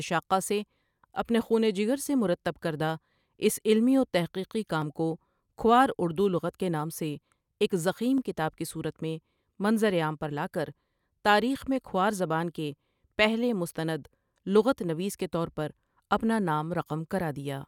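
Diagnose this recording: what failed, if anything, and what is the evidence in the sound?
The speech has two tiny blocks of digital silence, at 4.82 s and 8.18 s, each only about half a millisecond long (0.48 ms and 0.44 ms). At that length you don't hear a hole, just a sharp tick where the signal drops straight to zero and jumps back with no fade. That points to the driver or buffer stage, where a chunk of output wasn't filled in time and went out as zeros.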